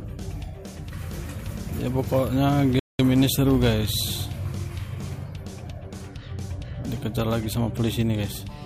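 At 2.79 s the sound cuts out abruptly in mid-flow and the output falls completely silent for about 200 ms, until 2.99 s, when it picks up again. This gap is a playback stall. The player likely ran out of buffered data, or its playback thread was briefly blocked, so nothing reached the output until it recovered and resumed feeding samples. The result is a hole in the audio.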